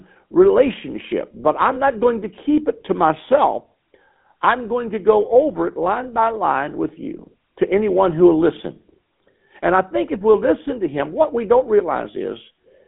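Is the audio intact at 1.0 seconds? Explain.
No. At 1.0 s, as throughout, the speech has passed through a GSM full-rate codec, which fits a 13 kbps stream. It rebuilds the voice from a vocal-tract model driven by coarse, regularly spaced pulses, so it sounds plainly buzzy and gravelly, confined to roughly 200 Hz to 3.5 kHz with nothing above 3.8 kHz.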